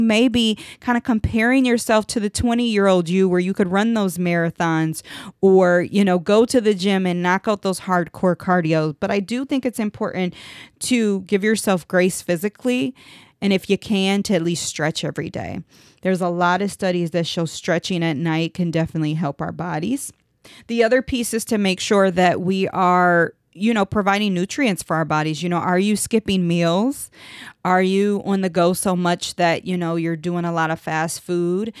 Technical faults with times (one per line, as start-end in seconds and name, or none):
none